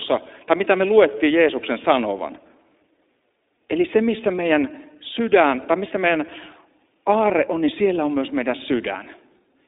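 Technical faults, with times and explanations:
Throughout: iLBC codec. The speech is confined to a band of roughly 250 Hz to 3.7 kHz, so it sounds thin and telephone-like. Each 20 ms frame is coded on its own, leaving a plainly audible rough, synthetic edge, which fits the 15.2 kbps mode.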